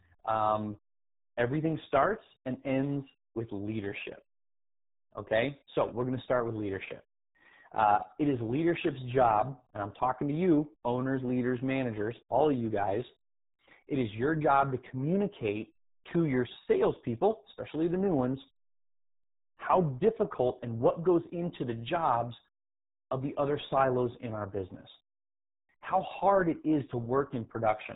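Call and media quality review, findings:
Speech muffled and gargly for the whole clip, nothing above 3.8 kHz. RealAudio 14.4 codec, heavy damage consistent with an 8 kbit/s dial-up speech stream discarding detail.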